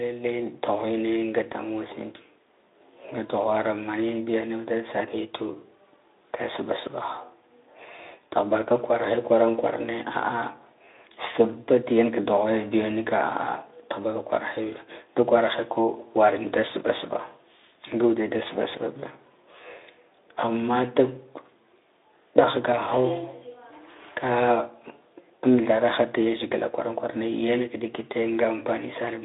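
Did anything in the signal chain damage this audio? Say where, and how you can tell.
No, nothing damaged this audio.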